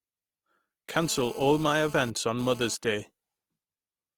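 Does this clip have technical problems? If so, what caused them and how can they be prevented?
Yes. Throughout the speech there is a grainy, rough quality, with tonal parts of the voice turning noisy rather than swirling, and the spectrum still extends to about 20.5 kHz. This is likely Opus compression in its music (CELT) mode, which fits a low rate of around 24 kbps. The encoder keeps each band's energy but fills starved bands with folded or noise content. That is why it sounds grainy and not hollow like MP3. Encoding at a higher Opus bitrate would prevent it.

From 0.94 to 2.75 s a hard, raspy GSM phone buzz appears at 217 Hz with many harmonics, sitting about 20 dB below the speech. Its pulsed rhythm follows a nearby 2G phone's bursts during a data transfer, not the speech. It is distinct from mains hum, which sits at 50 or 60 Hz and sounds smoother. Keeping phones away from microphones, cables and interfaces, or switching them to airplane mode, prevents it.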